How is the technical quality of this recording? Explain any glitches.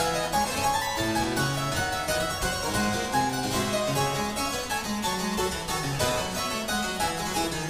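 No glitches are audible anywhere in the recording, so there is nothing to explain.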